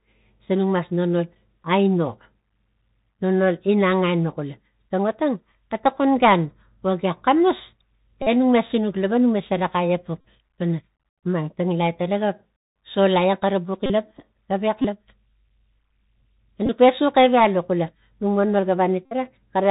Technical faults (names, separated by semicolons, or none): Bluetooth CVSD headset codec; Bluetooth headset packet repeated